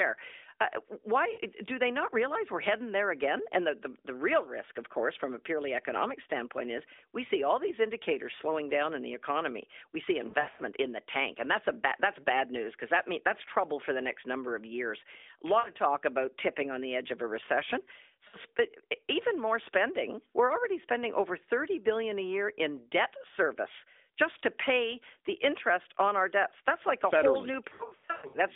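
Lost AMR speech frames: radio errors corrupted frames, so the narrowband decoder rebuilt them from the last good frame with falling gain. There are brief 40 to 60 ms dips at 1.34 s, at 15.6 s before "of talk about tipping", and at 18.3 s after "edge of a recession". Longer scattered stretches of warbling, fading sound come at 10.3–10.6 s before "in the tank and" and at 27.7–28.4 s.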